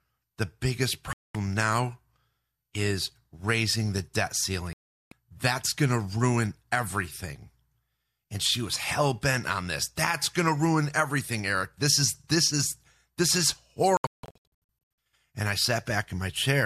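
At 1.13 s the speech mutes for about 0.22 s, and after "is raising the debt" it drops out again from 4.73 to 5.12 s. Following "this is this is" at 13.97 s comes a cluster of short holes, the longest about 0.17 s. This is digital broadcast dropout: the receiver lost good frames and muted until valid ones returned. Unlike concealment or buffer glitches, each gap is clean silence with no smearing or repeats, and the programme resumes further on.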